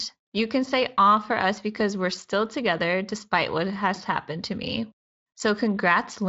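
No faults are present in the speech, which has passed through the Speex codec, with its content stopping at about 7.7 kHz and only light coding texture that fits a mid-range quality setting.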